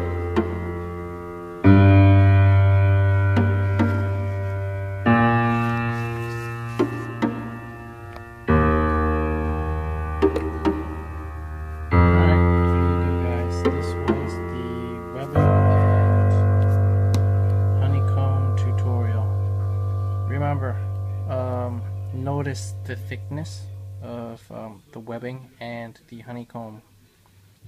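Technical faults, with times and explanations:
No technical faults detected.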